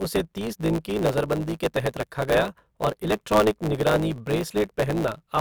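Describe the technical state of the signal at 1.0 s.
At 1.0 s the speech carries a steady buzz near 109 Hz and runs about 1.09 times fast with its timbre kept, throughout the clip: a truncated block size mismatch, with each block's tail discarded.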